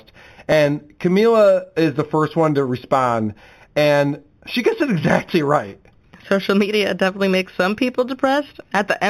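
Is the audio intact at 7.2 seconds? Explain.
No. At 7.2 seconds, as across the whole clip, the speech carries a faint metallic shimmer on sibilants, and the top of its band sounds dulled. This is imaging from linear upsampling. The rate was raised by joining samples with straight lines, which fits audio taken from 8 kHz up to 44.1 kHz. That crude interpolation barely filters anything, so a mirrored copy of the spectrum survives between 4 kHz and 8 kHz, roughly 25 dB below the speech.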